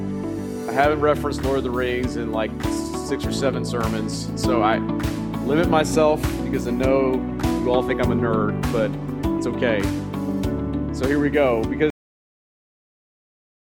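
At 11.90 s the audio shows a cut-off end: the final buffers were never written, so the sound stops mid-event and falls straight to digital silence for the last 1.76 s. The waveform ends abruptly in a flat line, and the spectrogram shows a sharp vertical edge into blank.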